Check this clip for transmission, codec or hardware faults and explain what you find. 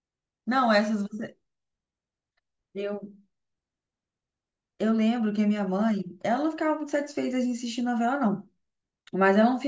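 No transmission, codec or hardware faults are audible here.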